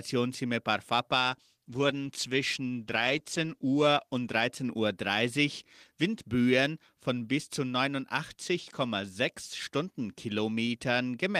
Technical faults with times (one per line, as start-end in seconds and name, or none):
1.22-4.93 call bitrate drop